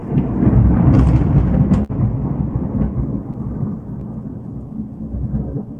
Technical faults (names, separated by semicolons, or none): clock drift between sender and receiver; short stall from a late packet; repeated timing corrections